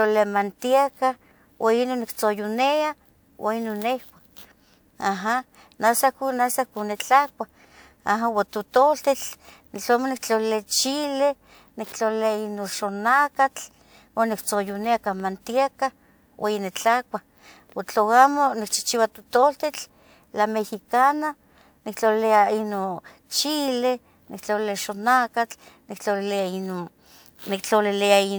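A recording of speech with no technical faults audible anywhere in the signal.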